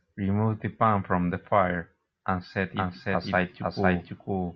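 At 2.75 s a doubled audio track begins and runs to the end of the clip. A second copy of the speech appears out of nowhere, with no fade-in. It trails the original by about half a second and sits at roughly the same level. The copy is full-band and dry, with no decay or room colour, so it sounds like an overlapping duplicate rather than an echo. It was likely caused by a second, slower capture path feeding the mix.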